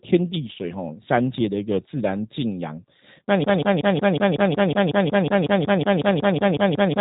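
From start to finish, the speech carries G.729 codec damage, and it is plainly audible. Nothing above about 4 kHz survives. The voice is rebuilt from a vocal tract model and sparse pulses, which fits an 8 kbit/s codec. It sounds rough and slightly synthetic.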